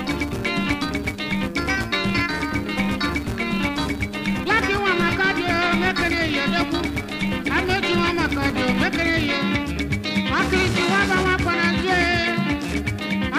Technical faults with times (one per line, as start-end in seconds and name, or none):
0.00-9.37 filter restarted on every block